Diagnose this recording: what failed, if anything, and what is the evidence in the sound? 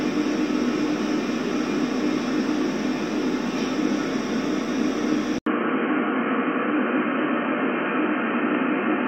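Input switched to a poorer device, at 5.38 s and lasting to the end. After an 80 ms silence, the sound turns dull and boxy, with nothing above 3.2 kHz, and a faint new background noise sits well below the signal while the overall level stays about the same. At the capture/driver stage, the system likely moved mid-recording to a narrower-band microphone or a headset call profile, which brings its own bandwidth and noise.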